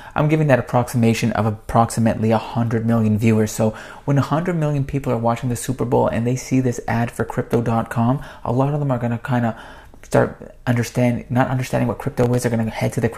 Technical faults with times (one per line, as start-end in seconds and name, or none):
7.20-7.54 processor overload crackle
12.23-12.38 processor overload crackle